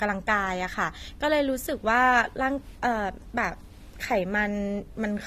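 AAC compression damage runs throughout this speech clip: nothing is present above 14.5 kHz, and the top of the spectrum sounds dull and smeared, with a fizzy, warbling texture on sibilants and sustained vowels. The likely cause is low-bitrate AAC-LC coding, consistent with roughly 32 kbps. At that rate the encoder drops the cut-off and quantises its 1,024 frequency lines per frame coarsely, leaving gaps in the spectrum that make the artefacts plainly audible.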